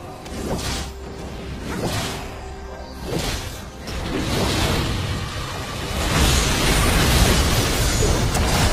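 At 1.33 s the sound abruptly loses quality and stays degraded until 7.33 s, when full fidelity returns just as suddenly. This is an adaptive stream at a lower bitrate: the player dropped to a thinner version of the stream, with nothing above 14.9 kHz, which fits a switch from roughly 96 kbit/s AAC to a 20 kbit/s HE-AAC rendition. Unlike a dropout or buffering stall, there is no gap, only a clean step down and back up.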